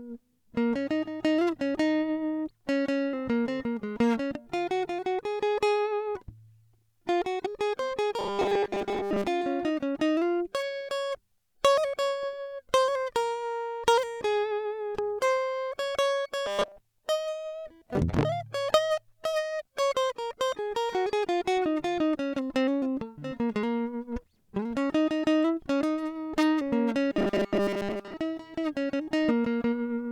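From 8.19 to 9.28 s, 16.46 to 16.80 s and 27.13 to 28.14 s the music collapses into a rigid, metallic buzz pitched at 200 Hz, still loosely tracking the material underneath. This is robotic sound from repeated short buffers, likely caused by audio arriving too slowly, so a 5 ms slice is looped to fill the gap. That loop length sets the fixed buzz, and most of the real audio in these stretches is skipped.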